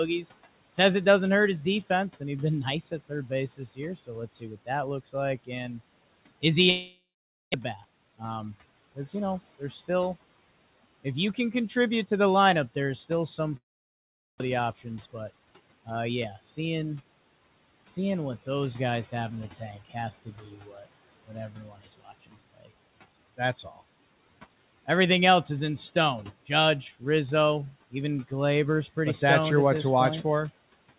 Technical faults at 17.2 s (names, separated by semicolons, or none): none